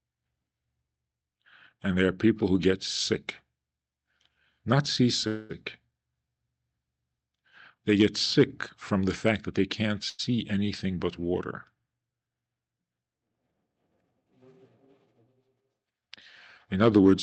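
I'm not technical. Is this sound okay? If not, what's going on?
No, there are two problems. From 5.27 to 5.52 s the speech stalls for about a quarter of a second, most likely a call audio freeze: the call's data was delayed, so the last sound is stretched into a fading buzz or hiss. Nothing is lost, and the speech resumes where it stopped.

From 10.10 to 10.21 s there is a burst of packet loss. The sound again turns into a short fading buzz or hiss, but here about a tenth of a second of speech is actually gone, so the speech jumps ahead instead of carrying on where it stopped.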